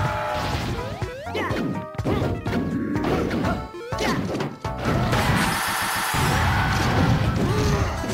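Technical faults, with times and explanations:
5.67 to 6.09 s, repeated frames: a 139 ms chunk, which fits a run of six compressed frames, plays three extra times in a row, so you get a quick stutter. The decoder just played the duplicated data again, adding 418 ms to the audio.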